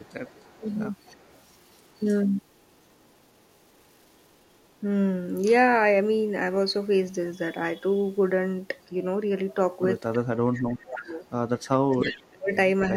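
Speech with two faults. There is an echo leak from 0.0 to 4.72 s, briefly at 8.81 to 8.85 s and at 10.13 to 10.17 s, and again from 10.95 to 12.22 s. A faint copy of the talker returns 309 ms late. It sits about 30 dB down at first, almost buried near 8.8 s, and grows to about 15 dB below the speech by the end. The likely cause is a far-end loudspeaker whose echo canceller let part of the signal back into its microphone. The clip also has speech suppressed in double talk. There is a short dip at 0.57 to 0.65 s of about 20 dB. A longer one runs from 10.15 to 11.25 s, cutting roughly 30 dB for about a second. Another runs from 11.85 to 12.96 s, reaching about 35 dB. These cuts coincide with the echo. The likely cause is an echo canceller that could not tell the talker from the returning sound, so it turned both down.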